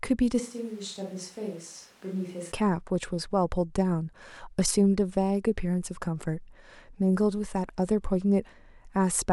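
A short speech recording in which the sound abruptly turns roomy and hollow from 0.41 s to 2.51 s, losing bass and dropping around 10 dB in level, while background room noise rises to roughly 25 dB below the speech. The change in and out is instantaneous. This is likely a switch to a distant microphone, with a far-off pickup such as a camera mic standing in for the close microphone during that span.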